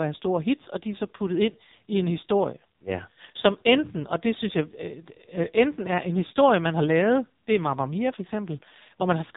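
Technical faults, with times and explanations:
Throughout: AMR narrowband mobile codec. The speech has gone through a narrowband mobile speech coder running on a very small bit budget, which fits AMR-NB's 5.9 kbps mode. The coder rebuilds the voice from a vocal-tract filter excited by only a few pulses in each short subframe, so at this rate the damage is heavy: the speech sounds buzzy, synthetic and thin. Nothing above 3.8 kHz survives, which leaves a muffled telephone quality.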